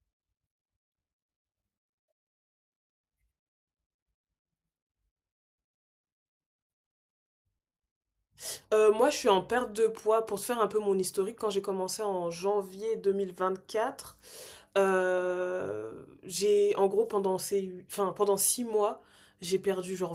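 From 7.01 to 7.80 s, the speech shows repeated packet loss, with a robotic sound. Audio kept arriving late or not at all. Each short hole, up to 50 ms, was patched by stretching the last sound. In total, 240 ms is lost. It sounds choppy.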